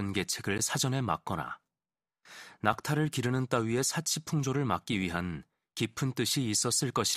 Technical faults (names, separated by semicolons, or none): block of digital silence